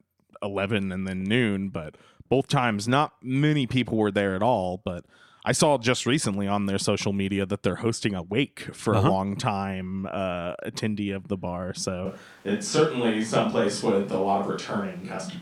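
Switch to a distant microphone from 12.06 s to the end: the speech abruptly turns roomy, thin and hollow at a similar level, with room noise roughly 30 dB below it, likely because the close microphone dropped out.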